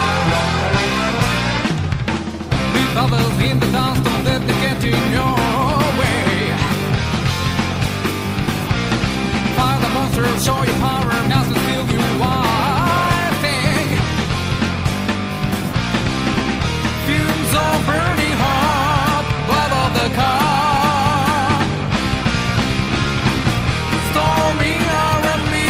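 No technical faults can be heard in the recording at any point.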